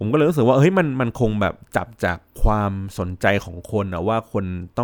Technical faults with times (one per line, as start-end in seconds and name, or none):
none